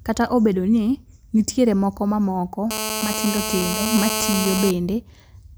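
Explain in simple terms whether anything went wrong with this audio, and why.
From 2.71 to 4.71 s, right after "ni nitiere moko mamoko", a hard, raspy buzz sits on top of the speech. It holds steady for those two seconds and has nothing to do with what is being said. This is GSM phone buzz. A 2G mobile phone close by was on a call, sending radio pulses about 217 times a second. The recording circuitry picked those pulses up and turned them into sound.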